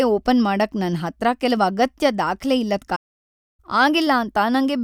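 A playback stall runs from 2.95 to 3.60 s in this speech clip. Right after "ಕೆಲವ್ ಅಗತ್ಯ ದಾಖ್ಲೆ ಇಲ್ಲದ್", the output drops to silence mid-flow for about 0.63 s and then resumes. The likely cause is that the player's buffer ran dry or its audio thread was briefly blocked, so nothing reached the output until data was flowing again.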